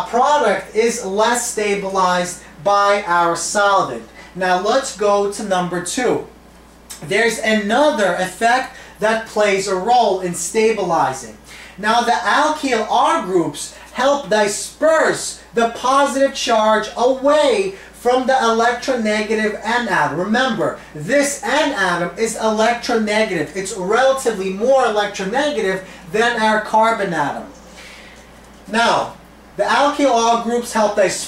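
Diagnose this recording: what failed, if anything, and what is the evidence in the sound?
Nothing in this recording stood out on listening as a failure at any stage of the chain.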